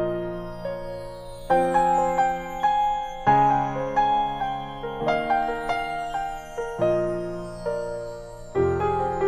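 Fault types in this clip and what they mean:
No technical fault can be heard anywhere in this audio. Nothing in the sound suggests a problem in how it was captured, processed or delivered.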